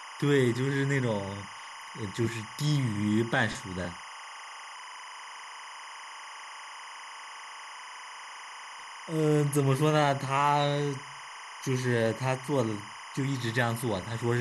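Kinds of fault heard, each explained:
Timecode bleed: linear timecode leaking in at 25 frames per second, a chirping warble near 1 and 2 kHz about 15 dB under the speech, pitch-switching unlike a steady whistle.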